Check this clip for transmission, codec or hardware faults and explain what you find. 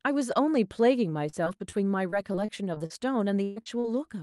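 Yes, the clip has packet-loss faults, all concealed by the receiver. It travelled over a call path whose spectrum tops out around 12 kHz, which fits Opus at roughly 48 kbps.

Repeated packet loss (robotic sound) occurs from 1.29 to 1.74 s (four gaps, longest 32 ms) and from 2.10 to 2.92 s (five gaps, longest 39 ms). Each lost packet was patched by extending the previous sound, so the speech turns choppy, with pieces missing. On a spectrogram this shows as short smeared, flattened harmonic patches at irregular intervals.

A burst of packet loss runs from 3.44 to 3.58 s. About 120 ms of audio never arrived, and the receiver stretched and faded the last sound across the hole, giving a held buzz or fading hiss before speech resumes. The waveform shows a decaying, repetitive stretch, and the spectrogram shows frozen bands.

Short concealed packet loss follows at 3.62 to 3.68 s and 3.80 to 3.86 s, each about 40 ms. 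The receiver synthesised the missing piece from the preceding pitch or noise, then blended back into the real audio. It is heard as a brief smear or wobble, and on a spectrogram as a thin blurred column where detail disappears.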